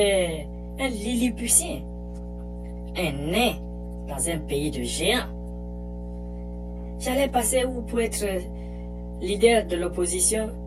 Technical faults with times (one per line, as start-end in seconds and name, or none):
0.00-10.66 mains hum